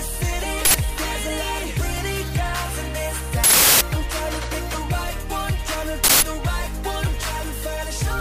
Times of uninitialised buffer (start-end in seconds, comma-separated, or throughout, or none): 0.65-0.74, 3.44-3.81, 6.04-6.22